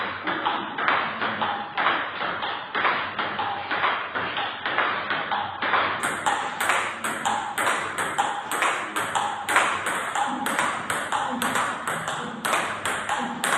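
Adaptive stream starting at a low bitrate, from 0.0 to 6.0 s: the player opened on a heavily compressed version, which sounds like 16 kbit/s AAC, with nothing above 5.3 kHz, then jumped without a gap to a fuller-bandwidth version around 96 kbit/s.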